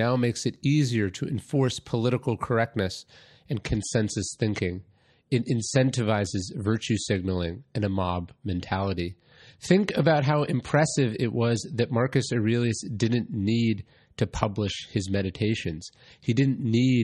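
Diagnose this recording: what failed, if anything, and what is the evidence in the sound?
Adaptive stream at a lower bitrate, from 3.51 s to the end, just after "to enforce political correctness". At the network stage, the player switched without a gap to a leaner encode: nothing above 11.8 kHz, stronger codec artefacts, which fits MP3 falling from 128 to 35 kbit/s.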